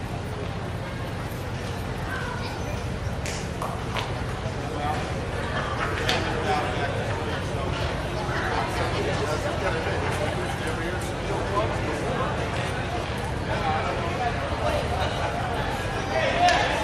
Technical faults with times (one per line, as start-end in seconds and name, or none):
none